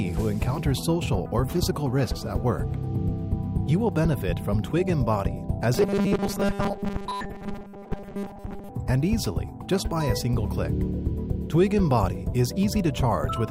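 From 5.74 s to 8.69 s the sound collapses into robotic sound from repeated short buffers: a rigid, metallic buzz at 200 Hz that loosely tracks the underlying audio. The likely cause is audio arriving too seldom, with the playback filling gaps by looping a fragment about 5 ms long, so most of the real signal in that stretch is skipped. A spectrogram would show evenly spaced harmonics locked at multiples of 200 Hz, and the waveform would show near-identical short cycles repeating.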